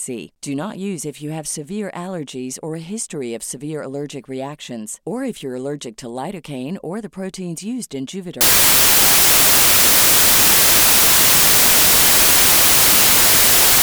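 From 8.41 s, right after "the proteins used in", the speech turns into loud, harsh broadband noise through to the end: samples built from the wrong bytes. Misassembled bytes push each sample's fast-changing low bits into the large part of the value.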